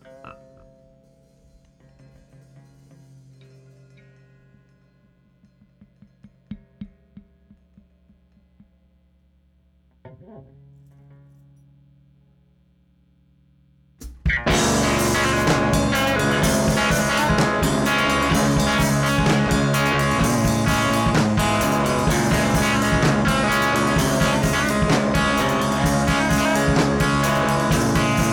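No technical faults can be heard anywhere in the audio, and the signal holds steady throughout.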